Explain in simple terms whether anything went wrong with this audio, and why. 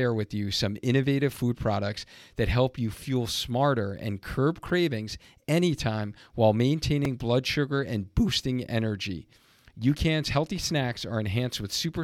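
A repeated buffer occurs at 4.69 s and again at 7.05 s in this speech. Each time, fresh audio reached the playback device too late, so it replayed the tiny slice it had just played. That slice lasts only about 3 ms, so the repeats come out as a brief buzzy click, not a clear stutter. The first is a little longer, about a hundredth of a second, and the second is roughly half that.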